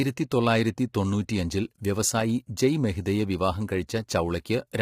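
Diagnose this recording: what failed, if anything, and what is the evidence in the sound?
The codec stage failed. Throughout the speech, the voice sounds rough and grainy. Noise fills the gaps between harmonics, and the top band sounds thin and synthetic. The likely cause is low-delay AAC compression (AAC-ELD). Its short frames blur pitch harmonics. The heavy damage fits a bitrate near 24 kbps.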